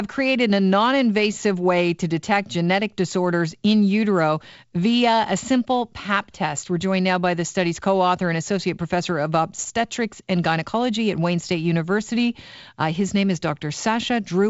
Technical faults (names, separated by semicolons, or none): none